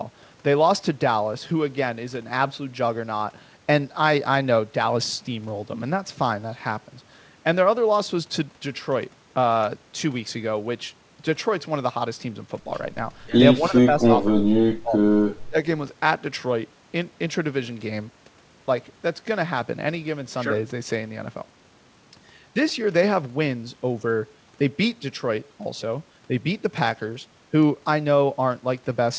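From 13.6 to 15.01 s and again at 15.49 to 15.56 s, the speech sinks by up to about 20 dB, speech suppressed in double talk, likely from an echo canceller turning down the talker during overlap. Unlike packet-loss dropouts, the level ducks rather than glitching.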